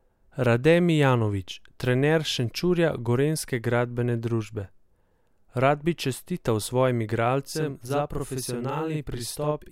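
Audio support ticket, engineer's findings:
Channel delay (doubling), 7.47 s to end of clip, right after "bi čestital svojim". Speech doubles into a slap echo at equal level, about 46 ms behind. Probable component: one channel's buffer path, late by a delay that fits a 2048-sample buffer. Both channels summed to mono, so the late copy stands apart as a distinct repeat.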